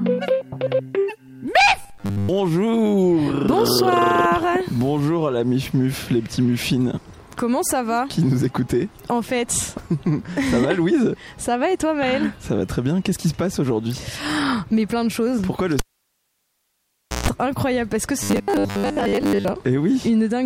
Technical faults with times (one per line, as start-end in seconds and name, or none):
1.82-2.29 robotic sound from repeated short buffers
15.79-17.28 cable pulled and plugged in
18.23-19.49 robotic sound from repeated short buffers